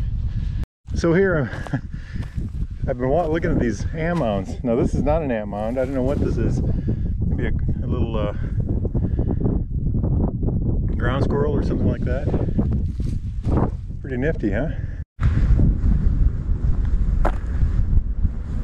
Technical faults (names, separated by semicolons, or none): none